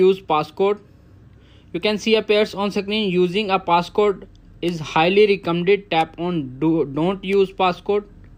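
Nothing in this recording trips up the ear; there's no glitch, dropout or distortion to point to anywhere along the way.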